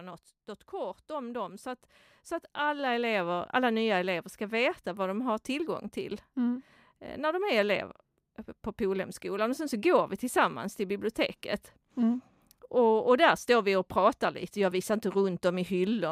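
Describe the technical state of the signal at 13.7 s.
At 13.7 s the speech signal is intact, with no audible technical fault at that moment.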